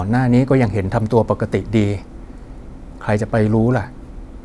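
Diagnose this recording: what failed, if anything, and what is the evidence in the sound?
Nothing stood out on listening to this speech recording that would point to a failure at any stage of the chain.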